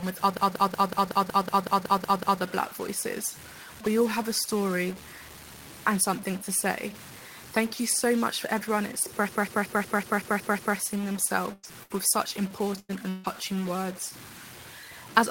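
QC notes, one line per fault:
throughout: stuck bit, likely a data bit frozen at one value; about half the samples shift by that bit's weight, giving distortion and noise filling the pauses.
0.37–2.42 s and 9.29–10.77 s: system hang loop; one roughly 186 ms slice replays 11 and then 8 times at 5.38 Hz, a machine-gun stutter that fits an 8192-sample ring buffer.
11.53–11.66 s, 11.83–11.93 s, 12.80–12.92 s: burst of packet loss; the last sound is held and faded for about 96, 66 and 92 ms, then speech resumes with 100, 60 and 100 ms missing.
11.63–11.65 s, 12.89–12.91 s, 13.24–13.26 s: lost packet rebuilt from error correction; each 20 ms stretch is played from a low-bitrate copy, so there is no gap but the sound turns briefly rougher and noisier.
13.09–13.34 s: long network dropout; the sound is extended as a fading buzz or hiss for about 150 ms, and speech returns with about 160 ms skipped, likely from a stretch where no audio arrived.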